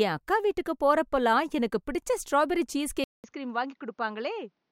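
At 3.04 s, right after "எனக்கு பிடிச்ச ஸ்ட்ராபெரி சீஸ்", a 200 ms silence is followed by duller, slightly quieter speech with nothing above 6.8 kHz, likely an input switched to a poorer device. A filter wouldn't add a gap or a new, faint noise floor.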